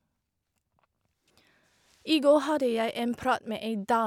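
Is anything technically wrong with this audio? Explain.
No, nothing technically wrong here.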